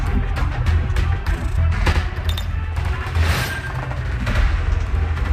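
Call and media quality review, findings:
Channel delay (doubling) from 1.92 s to end: one channel about 85 ms late, fits a 4096-sample buffer, summed to mono. Single equal-level slap, no decaying tail, unlike room echo.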